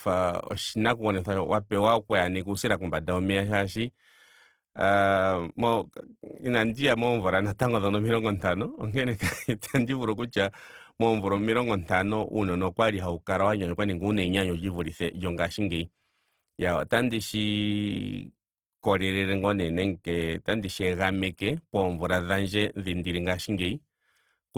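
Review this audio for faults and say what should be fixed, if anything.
Throughout the speech, the sound is grainy and rough, with a noisy texture where tonal detail should be. The top end still reaches about 20.4 kHz, so this is texture damage, not muffling. The likely cause is Opus compression in its music (CELT) mode at a low rate. The grain fits roughly 16 kbps, where the encoder keeps each band's energy but fills starved bands with noise or copied lower content. To prevent it, encode at a higher Opus bitrate or keep an uncompressed master.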